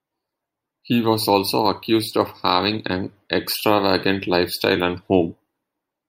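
Nothing stood out as a technical fault on listening to this speech recording.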